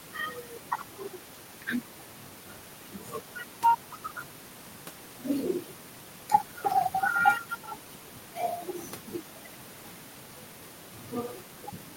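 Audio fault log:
Nothing stood out on listening to this speech recording.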